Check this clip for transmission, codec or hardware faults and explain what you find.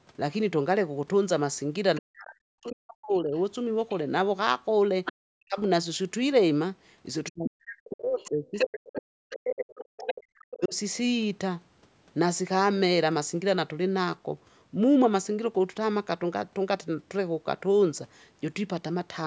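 Two faults occur, both echo-control problems on a speakerphone-style call. The audio has no content above 8 kHz, consistent with normal call microphone processing.

Other side's voice leaking through: a second voice appears at 1.95 to 1.99, 2.67 to 3.95, 5.05 to 5.61, 7.9 to 8.79 and 9.32 to 10.56 s. It starts faint, well below the talker. By 7.9 s it is about as loud. The likely cause is loudspeaker echo the canceller failed to remove.

Speech suppressed in double talk: the talker dips sharply at 1.99 to 3.33, 5.35 to 5.58 and 7.3 to 10.75 s, sometimes almost to silence. These drops overlap the leaking voice. The likely cause is the echo canceller turning everything down when both sides spoke at once.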